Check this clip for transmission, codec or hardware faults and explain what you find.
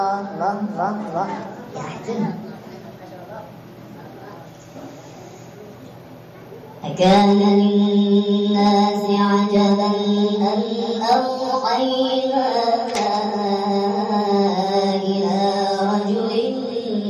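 A wrong sample rate runs throughout: the audio plays about 1.45 times too fast, consistent with 22 kHz material played at 32 kHz. The whole sound is rushed and shifted about 6.45 semitones higher.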